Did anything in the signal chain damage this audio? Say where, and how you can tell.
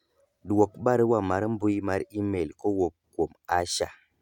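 No, nothing in the chain has left an audible mark on this speech recording. Across the whole clip, no stage between capture and playback shows a trace that points to damage.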